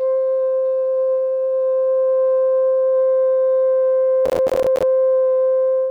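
Music, with processor overload crackle from 4.26 to 4.83 s: a rapid run of tiny silent gaps, pointing to buffers of around 10 ms, with roughly thirty deadlines missed over that stretch. Unlike a single dropout, it sounds like gritty tearing that stops once the load passes.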